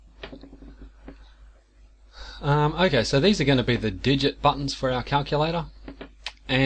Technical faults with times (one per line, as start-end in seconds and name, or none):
none